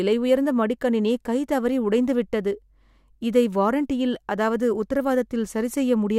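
Nothing in the signal of this speech recording points to a technical fault at any point.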